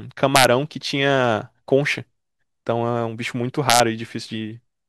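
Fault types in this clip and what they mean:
Integer overflow, at 0.36 to 0.45 s and again at 3.70 to 3.80 s: on these loud stretches of speech the signal is pushed about 2 dB beyond the largest value the integer format can hold, and instead of being held at the ceiling the samples wrap around to the opposite extreme. Each peak that crosses the limit jumps across the full range, producing harsh, violent cracks far sharper than ordinary clipping.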